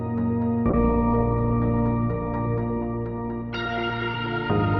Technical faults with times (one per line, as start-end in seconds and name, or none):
0.71-4.79 call bitrate drop